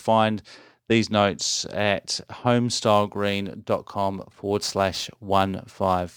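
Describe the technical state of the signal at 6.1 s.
At 6.1 s the speech carries crude rate conversion. It runs from 2.85 s to the end of the clip. Samples were simply dropped to reach the new rate, with no filtering. The pattern fits a conversion from 48 kHz to 44.1 kHz. Dropping samples on a fixed cycle creates shifted, inharmonic copies of the voice. They sit roughly 25 dB below the speech. You hear a gritty, inharmonic fizz riding on the louder and brighter sounds.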